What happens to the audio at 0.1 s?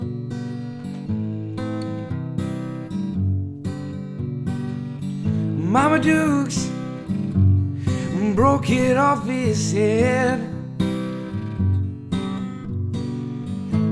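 Nothing goes wrong at 0.1 s; the audio plays through that moment intact.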